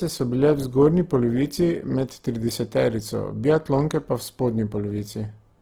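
Throughout the speech, tones sound rough, grainy and noisy rather than swirling, with the full bandwidth kept. That points to Opus compression, likely in its music mode at a low rate around 16 kbps, filling starved bands with folded or noise energy instead of leaving MP3-style holes.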